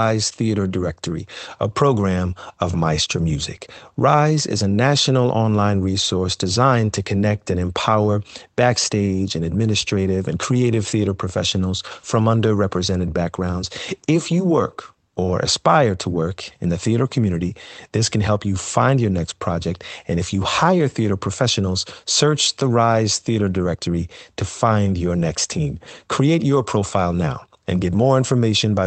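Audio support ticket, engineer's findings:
Clock drift between sender and receiver: sender clock running roughly 4 percent fast against the receiver, present across the whole clip. Jitter buffer keeps overfilling as surplus audio arrives, so the receiver must discard material to hold latency. Result: a slightly rushed, uneven pace throughout, with small stumbles at irregular spacing.

Repeated timing corrections: receiver-side buffer trimming, 0.13 s to 28.82 s, net playout pace about 104 percent. Short slices cut, always in the same direction, at uneven intervals. Heard as faint hiccups and tempo wobble in the speech. Call path Opus, band-limited to 8 kHz.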